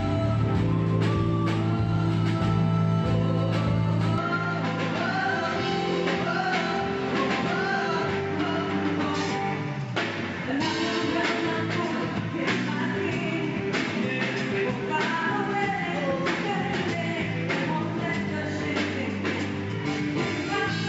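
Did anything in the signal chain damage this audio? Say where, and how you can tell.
Yes. At the capture stage, the input was likely switched to a poorer device at 4.18 s, with no gap at the changeover. From there to the end the sound turns duller, with nothing above 7.6 kHz. It also drops by around 5 dB, and a new noise floor sits roughly 30 dB below it.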